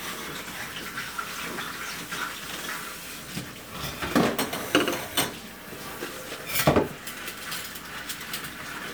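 A short recording of everyday sounds, and there's nothing technically wrong to point to anywhere in it.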